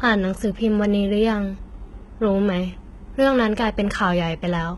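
It's a short speech clip, and the whole thing has that heavy, gritty top end you get from a low-rate codec, most likely HE-AAC compression. The treble sounds bright but synthetic, as if it were copied up from the lower bands rather than carried through, so the s sounds come out metallic and lispy. Nothing survives above about 11.7 kHz, and the amount of damage fits a bitrate around 16 kbps.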